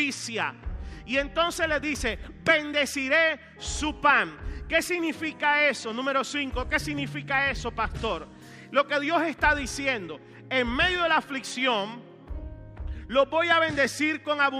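No technical faults are audible.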